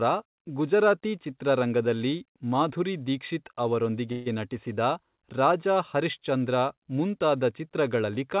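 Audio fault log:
4.12–4.35 s call audio freeze: packets were likely held up and the jitter buffer ran dry, so the last sound was stretched into a fading buzz for about 139 ms. "ನಟಿಸಿದ ರಾಜಾ ಹರಿಶ್ಚಂದ್ರ" then resumes intact but that much later, over G.711 audio with nothing above 4 kHz.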